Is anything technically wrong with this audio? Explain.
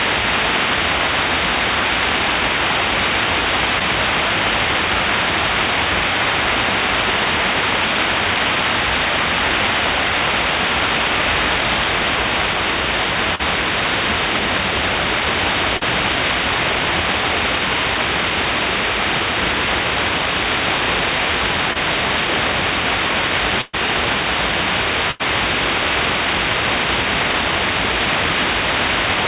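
Yes, the audio has two kinds of packet-loss fault, heard over a G.711 mu-law call path whose sound stops at 4 kHz.

Short concealed packet loss occurs at 3.79, 13.35, 15.77 and 21.73 s. In each case 20 to 40 ms of audio failed to reach the decoder on time, and the receiver filled the hole by extending the preceding sound before blending back into the real signal. It comes across as a brief smear or wobble. At 3.79 s the patch also stretches time by roughly 10 ms. These events differ from a burst because they are too short to fade.

Burst of packet loss occurs at 23.61 s, where about 120 ms is missing, and at 25.11 s, where about 80 ms is missing. Several packets in a row were lost, so the concealment had to carry on long enough to decay. The gap becomes a held buzz or a fading hiss, and the first one ends in about 10 ms of silence. The sound then resumes further on with a section skipped, which is what separates these events from the brief smears.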